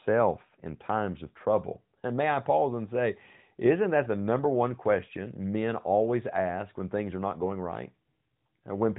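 No technical faults can be heard anywhere in the speech.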